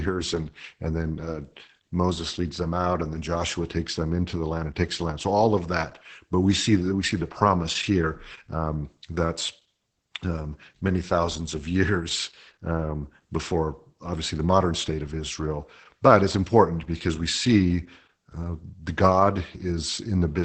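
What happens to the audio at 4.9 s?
At 4.9 s the speech carries Opus voice compression, which runs through the whole clip. The SILK speech coder has limited the band to wideband, leaving nothing above about 8.8 kHz. It codes the excitation coarsely, which fits a rate near 10 kbps. The voice sounds muffled, hoarse and slightly robotic.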